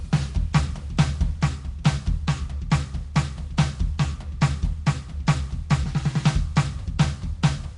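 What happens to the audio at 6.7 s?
Nellymoser compression runs through the whole clip, 6.7 s included: the music has a rough hissy halo, smeared blocks and nothing above 10.6 kHz, likely from a codec filling starved bands with noise.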